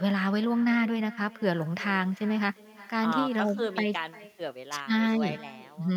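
Right from the start and all the way through, there's echo with no canceller: the far end's loudspeaker feeds back into its microphone, and nothing strips it out. So the speech returns roughly 0.4 s later, about 21 dB down, as a thin shadow.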